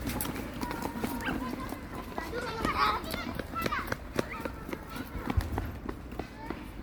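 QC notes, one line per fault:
Throughout, generation loss: the sound has a swirling, hollow quality with smeared, softened attacks, and the noise floor shimmers. The likely cause is repeated lossy encoding, around three passes, consistent with MP3 at about 96 kbit/s. Each pass re-quantises on a shifted frame grid, so the errors and spectral gaps compound. Content extends to 20.1 kHz, and the damage exceeds what that bitrate alone would explain.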